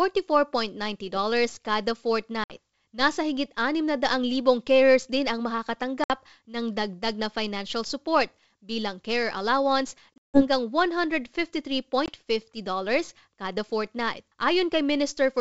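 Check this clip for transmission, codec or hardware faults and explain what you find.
Packet loss on an ADPCM call breaks this speech in four places. At 2.44 to 2.51 s about 60 ms goes missing. At 6.04 to 6.12 s another 60 ms goes, just before "ng dagdag na financial". After "support bilang care allowance", 10.16 to 10.43 s loses 180 ms in a cluster with a 160 ms run. At 12.06 to 12.16 s about 20 ms is lost. Dropped packets become hard-edged silences. The decoder's predictor and step size then drift from the sender's, so speech resumes slightly distorted before settling. The G.722 wideband coding beneath is clear.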